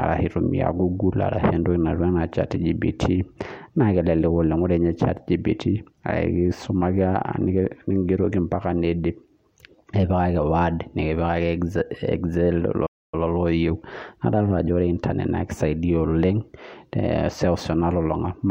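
A playback stall hits at 12.86 s and lasts until 13.14 s: the speech cuts off mid-flow into silence for about 0.27 s, then carries on. The player likely ran out of buffered data or had its output thread blocked.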